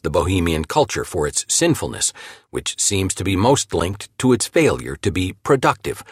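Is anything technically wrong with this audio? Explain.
Yes. From 3.76 to 3.94 s there is a short burst of gritty crackle, a rapid run of tiny dropouts tearing through the sound for under a fifth of a second. This is processor overload crackle: the processor fell behind and missed a handful of buffer deadlines in a row. Each missed buffer came out as silence with hard edges, and the spacing of the clicks fits buffers of roughly 5 ms. The crackle stops once the load clears.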